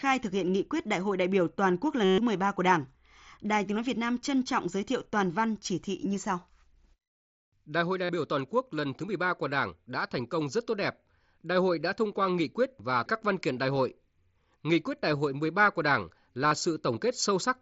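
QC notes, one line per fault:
2.04–2.18 s, 8.04–8.09 s and 16.48–16.52 s, concealed Bluetooth headset packet loss: gaps of about 135 ms (after "đại biểu toàn quốc"), 45 ms (before "biểu toàn quốc lần") and 38 ms were filled by repeating the closest-matching recent waveform. The longest gap becomes a buzzy tone held at full level, with a slight warble where speech resumes. A plain dropout would fall silent instead. The lengths fit runs of 7.5 ms mSBC frames, under the codec's light grain.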